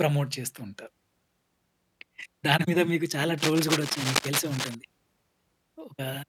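Cable scratch noise runs from 3.38 to 4.76 s: dense, uneven bursts of scratching and rustling sit over the speech, only a few decibels below it. This is likely a worn cable or connector being moved, its contact resistance changing rapidly.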